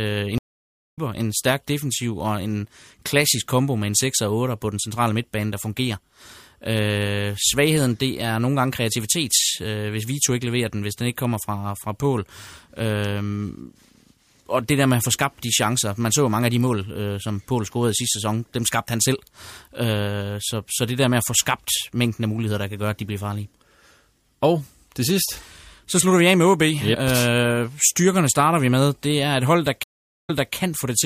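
A speech clip with two stream reconnects. At 0.38 s the audio drops out for 0.56 s. It resumes at "en stærk defensiv og", about half a second further on, so a stretch of speech is skipped. At 29.83 s there is a 0.43 s silence. Playback then restarts 0.29 s earlier, repeating material already heard. Each time the connection broke, the player went quiet, reconnected and started a fresh decoder mid-stream.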